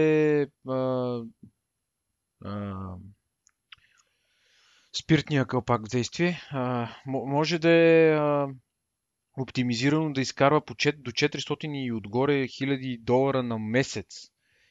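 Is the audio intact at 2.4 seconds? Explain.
Yes, the speech is intact at 2.4 seconds, with no dropout, click, distortion or other fault audible at that moment.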